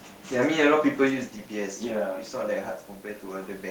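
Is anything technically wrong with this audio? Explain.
Yes, there is automatic gain rising from 1.05 s to the end. After the input drops by about 10 dB around 1 s, when the talker moves away, the gain control slowly raises its gain, so voice and room noise swell together. That shared swell distinguishes it from a talker simply moving closer.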